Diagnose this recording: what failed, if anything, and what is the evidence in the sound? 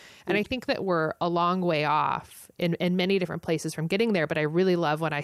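The codec stage failed once, with a corrupt frame decoded. At 0.43 to 0.46 s the speech is broken by a short glitch lasting about 30 ms. That span fits a single damaged compressed frame. Flipped bits in that frame gave the decoder wrong gains or misread spectral codes. It played the frame anyway, so energy landed at the wrong frequencies for that one frame. The spurious burst peaks around -25 dBFS.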